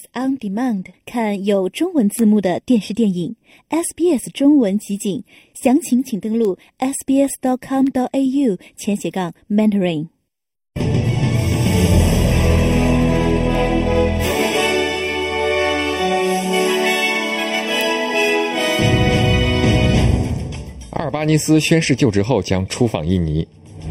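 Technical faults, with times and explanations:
Throughout, channel delay (comb filtering): one channel lags by roughly 0.4 ms before mono summing, carving fixed notches from around 1.5 kHz, seen as steady dark horizontal bands.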